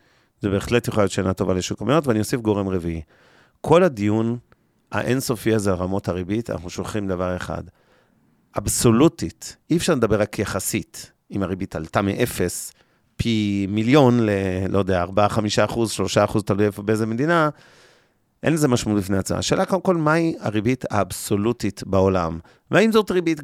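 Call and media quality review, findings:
No audible faults found.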